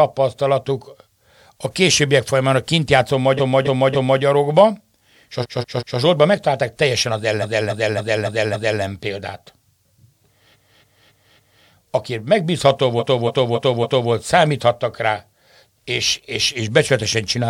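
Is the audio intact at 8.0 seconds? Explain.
No. At 8.0 seconds the audio is caught in repeated frames, spanning 7.41 to 8.80 s, just after "megtalálták teljesen az". A 278.6 ms block of compressed audio plays five extra times, so the speech stutters. This adds about 1.39 s.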